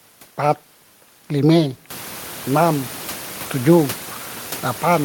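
Nothing stood out on listening, and the rise in room noise at about 2 s, which settles roughly 18 dB below the speech, belongs to the recording room rather than the system.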